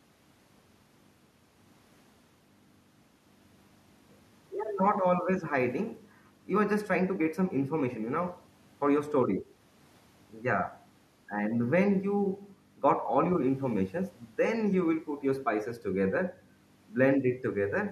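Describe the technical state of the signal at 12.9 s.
At 12.9 s the speech signal is intact, with no dropout, clipping, glitch or other technical fault.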